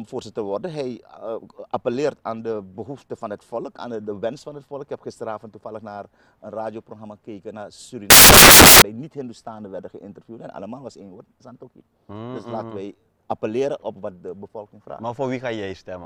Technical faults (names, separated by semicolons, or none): samples built from the wrong bytes